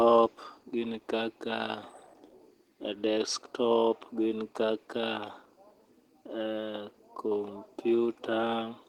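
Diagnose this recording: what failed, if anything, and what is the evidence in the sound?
The codec stage failed, through the whole clip. This is Opus voice compression in hybrid mode. Speech stays fullband, reaching about 20.1 kHz, but sounds plainly hoarse and slightly robotic. SILK codes the excitation coarsely below 8 kHz, with CELT above. That fits roughly 16 kbps.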